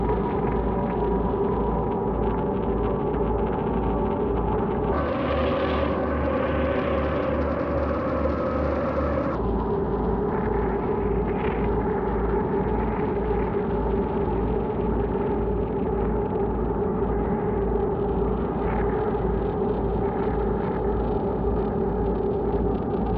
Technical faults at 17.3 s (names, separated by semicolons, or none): none